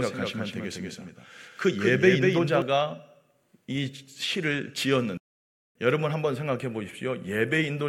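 From the very start of the speech until 2.62 s, a doubled audio track is present: a second full-band copy of the same speech runs roughly a fifth of a second behind, about 5 dB quieter, with no reverberant tail. It likely comes from the signal being captured again through a slower path. On a spectrogram every syllable's pattern reappears shifted to the right, and at 2.62 s the copy ends abruptly rather than fading.

At 5.17 s a playback stall cuts the speech off in mid-flow, leaving silence for 0.58 s until it resumes at 5.75 s. The likely cause is the player running short of data or having its processing thread blocked. The waveform shows a flat, empty stretch with a hard edge on each side, and the spectrogram shows a clean vertical band of nothing across all frequencies, with no gradual onset or release.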